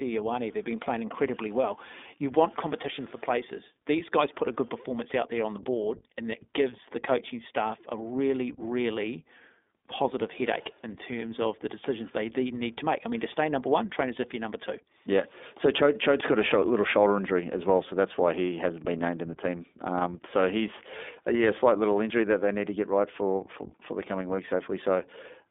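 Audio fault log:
throughout: iLBC codec. The sound is thin, slightly rough and synthetic, held within a band from about 250 Hz to 3.6 kHz. Each short frame's excitation is coded independently at a low rate, which fits iLBC's 15.2 kbps mode with 20 ms frames, so the coding damage is plainly audible.
24.36 to 24.39 s: lost iLBC frames. Just after "for for the coming", a brief buzzy, breathy held vowel replaces the speech for about 20 ms, consistent with one dropped frame. The decoder repeats the last pitch cycle mixed with noise, then recovers almost immediately.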